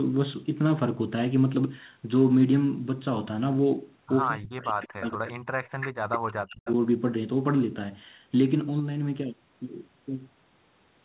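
Speech suppressed in double talk runs from 4.29 to 6.68 s. The speech dips and cuts out in pieces over about two seconds in total, falling by up to roughly 40 dB at its deepest. The likely cause is that both ends were talking at once, and the echo canceller, unable to separate the local talker from the loudspeaker's echo, turned everything down together. The result is choppy, fading speech.

Echo leak appears as three short scraps during that stretch, the last running just past its end: 4.85 to 5.14 s, 5.64 to 5.89 s, and a brief one at 6.65 to 6.73 s. Each is a delayed copy of the speech arriving about 0.22 to 0.23 s late. The copies sit around 15, 10 and 20 dB below the speech respectively, so the middle one is the most audible. This is likely one side playing the call on a loudspeaker, whose echo canceller failed to remove everything its microphone picked up and sent the residue back.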